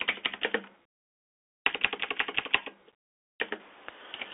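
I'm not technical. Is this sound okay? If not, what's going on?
No. The whole clip has gone through a Bluetooth CVSD headset codec, the old phone-call mode on wireless headsets. Everything above roughly 3.8 kHz is cut, so the speech sounds thin and boxed-in, s sounds come out scratchy, and a grainy hiss sits underneath throughout.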